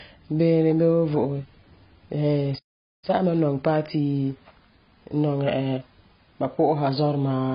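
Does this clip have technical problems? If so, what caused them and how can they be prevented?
Yes, there are three problems stacked on top of each other here.

The whole clip has heavy AAC compression damage. Nothing comes through above about 5 kHz, so the speech sounds dull and boxed-in, and the remaining detail has that smeared, warbly texture you get when a codec is starved. That level of damage fits a low bitrate, around 16 kbps, with AAC-LC likely being the codec. At that rate the encoder drops the top of the spectrum and coarsely quantises what's left. To prevent it, encode at a healthier rate, say 64 kbps or more for speech, or switch to a codec built for low-rate voice.

At 2.58 s the audio simply cuts out and stays silent until 3.04 s. That's a gap of about 0.44 s right in mid-flow, and it's likely a playback stall, where the player ran dry of data or its audio thread got blocked, so it had nothing to output until it recovered. 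To prevent it, give the player a deeper buffer and keep the audio thread at high priority, away from blocking work.

Straight after the gap, from 3.04 s to 5.96 s, the speech runs about 1.15 times faster than normal but at its usual pitch. That's time-compressed catch-up. The player is chewing through its backlog by snipping out tiny slices and cross-fading across the joins. The fix is the same as for the stall, because without the stall there's no backlog to rush through.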